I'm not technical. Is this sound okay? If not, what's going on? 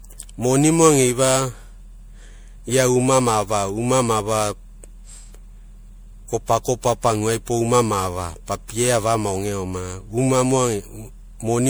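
No. The speech was likely re-saved in a compressed format about seven times (generation loss), so it sounds swirly, hollow and smeared throughout, with blurred sharp starts.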